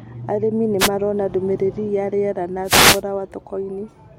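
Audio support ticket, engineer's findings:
Wireless microphone noise hits at 0.79–0.89 s, just before "marona ndũmĩrĩri ya rĩera", and at 2.64–3.02 s, after "ndũmĩrĩri ya rĩera na". Static swish over speech. Analogue FM radio link. Reflections cancel the carrier, so receiver noise rises through the fade.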